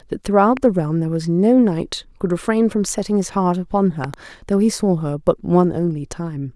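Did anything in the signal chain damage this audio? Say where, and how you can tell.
Yes. A sudden voltage step was added in the analogue wiring, likely from a plug, switch or static discharge. It is heard as a loud pop at 0.57 s and a double pop between 4.04 and 4.16 s, each about 10 dB above the speech, which continues underneath.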